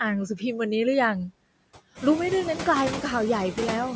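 Running through the whole clip is a layer of noise suppressor artifacts. The suppressor pulls down whatever bands it reads as steady noise, frame by frame, taking roughly 21 dB off it. So the background drops away in the gaps and creeps back up under the speech. Around 2 s the room noise itself comes up by about 11 dB, settling roughly 10 dB below the speech, which gives the suppressor more to chew on.

From 0.94 s to 2.43 s there's a run of CD scratch ticks, eight in all, about five a second. That's a disc blemish coming round once per revolution and wiping out more data than error correction can repair, so the player patches over or mutes the damaged samples. Each one is a tiny click or micro-dropout, the longest only a few milliseconds.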